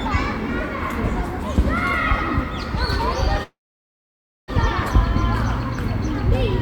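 A call audio freeze most likely interrupted this recording of sounds: packets stalled and the jitter buffer emptied at 3.43 s. The last sound briefly trails off, then about 0.94 s of silence follows until 4.50 s, when the audio resumes intact but 1.05 s later.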